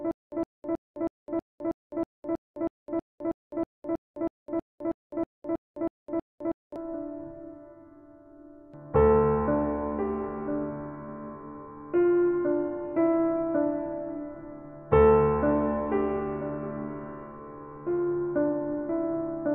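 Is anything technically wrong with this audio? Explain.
Yes. From the start to 6.76 s, the same 112 ms burst repeats every 320 ms, twenty times, separated by 208 ms of digital silence. This stutter with silent gaps likely comes from a stalled player or stream replaying its last fragment at each retry, so the audio meant for that span is lost.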